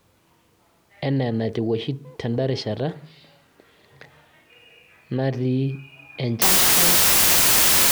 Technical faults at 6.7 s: wrong sample width

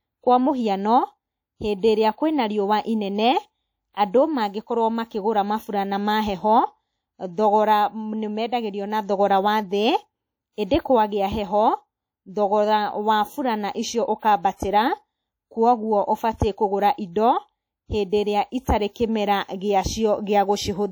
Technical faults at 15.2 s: WMA compression

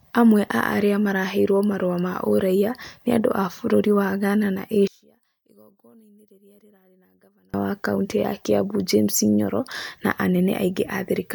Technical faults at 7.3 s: one channel inverted

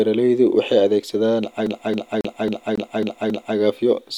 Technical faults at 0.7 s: none

